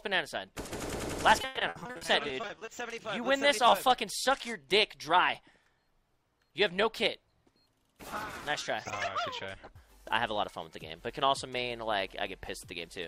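From 1.41 to 2.69 s, the stream suffers repeated packet loss, the robotic-sound kind. Data arrives late or not at all again and again, and each hole is bridged by extending the last good sound. With roughly fifteen separate dropouts, the longest about 120 ms, a little over a third of that stretch is concealed material. The audio turns choppy, stuttering as fragments repeat and drop away before normal flow returns.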